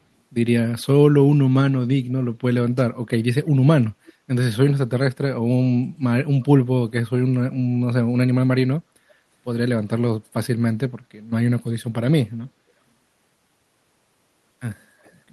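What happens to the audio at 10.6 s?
Nothing goes wrong at 10.6 s: the speech carries on intact through that moment, with no dropout, click or distortion.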